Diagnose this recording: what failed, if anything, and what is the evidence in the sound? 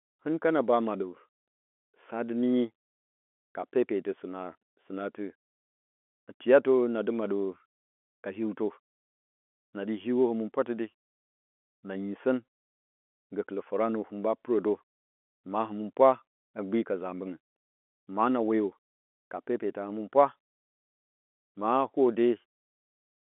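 Nothing failed: the speech shows no dropouts, clicks, clipping, distortion or timing faults, and the only coloration is the narrow telephone band of a G.711 line, with nothing above about 3.8 kHz.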